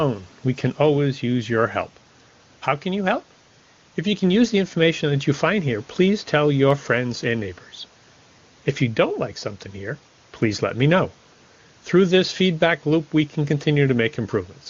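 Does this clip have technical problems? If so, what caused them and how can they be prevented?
No, nothing in this speech recording stood out as a technical problem on listening, so there is nothing here that needs preventing.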